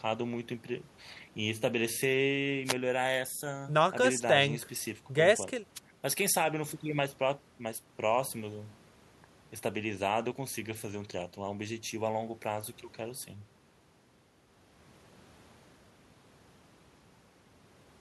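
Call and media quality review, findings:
Short swishes of static over the speech at 2.65–2.74 s and 5.75–5.79 s, under 0.1 s each. Wireless microphone noise hit: analogue FM radio link fading as reflections cancel, receiver noise rising briefly over the voice. Check receiver antenna placement and diversity.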